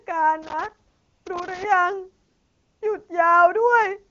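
From 0.43 to 1.65 s a loose connector crackle breaks in: a worn contact making and breaking chops the signal into irregular scratchy bursts. Unlike steady hiss or regular digital clicks, its timing is ragged and clustered, like a cable being moved.

Inside that stretch, from 0.89 to 1.25 s, and again from 2.27 to 2.81 s, AMR comfort noise takes over. The phone judged the line silent and stopped sending speech frames for 360 ms and then 540 ms, and the receiver filled the gaps with smooth synthetic noise. It differs from a simple dropout because the gap is filled rather than dead, and the noise switches in and out abruptly. The AMR wideband (HD Voice) codec carrying the speech sounds clean, which fits a high rate such as 23.85 kbit/s.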